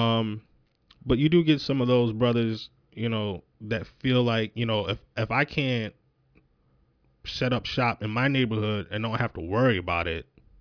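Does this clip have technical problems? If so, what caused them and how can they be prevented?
No, the speech signal shows no technical faults that a listener can hear, so there is nothing here to trace to a cause or to prevent.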